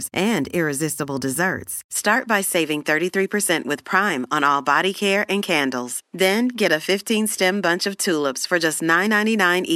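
From about 1.95 s to the end, the speech suddenly loses its top end, with nothing above 13 kHz, and a faint new background noise sits well below it. There's no gap and no level jump, so the input most likely switched to a poorer device.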